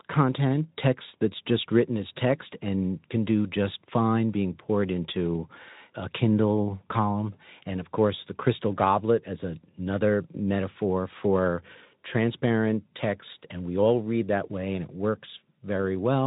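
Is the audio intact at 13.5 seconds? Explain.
Yes, the speech at 13.5 seconds is intact, with no dropout, click or other fault at that moment.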